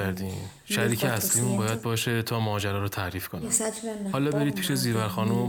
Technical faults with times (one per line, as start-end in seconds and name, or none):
none